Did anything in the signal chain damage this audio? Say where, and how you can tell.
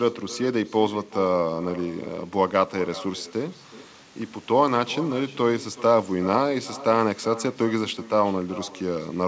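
Yes. An echo with no canceller runs through the whole clip: every phrase of speech is followed, roughly 0.4 s later, by a faint copy about 18 dB below it, thinner than the original. The damage is in call processing at the far end, where a loudspeaker fed the call back into an open microphone and no echo cancellation removed it, so the voice returns after the network round trip. The G.722 band limit at 8 kHz applies to both copies.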